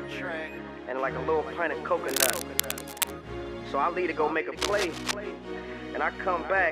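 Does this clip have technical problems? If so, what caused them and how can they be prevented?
Yes. Bursts of cable scratch noise run from 2.08 to 3.11 s, about as loud as the sound itself, and again from 4.57 to 5.13 s, somewhat quieter. Their dense, uneven rustling, rather than isolated clicks or regular crackle, points to the likely cause: a worn cable, connector or control being moved, so its contact resistance fluctuated rapidly. Replacing worn leads, cleaning the contacts and securing cables so they don't move during recording would prevent it.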